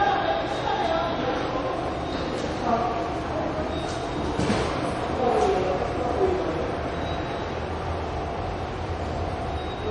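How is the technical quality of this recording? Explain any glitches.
The recording is band-limited and carries layered compression damage for its full length. Nothing is heard above 10.5 kHz, so the top end sounds dull and closed-in. Over that, several kinds of codec artefact sit together, heard at once in a way that doesn't behave like any single encoder. This points to transcoding between lossy codecs, likely a chain ending in a WMA encode at a modest rate. The lowest cut-off in the chain, fitting an early low-rate MP3 stage, has persisted, and each later encoder spent bits re-coding the earlier artefacts while adding its own.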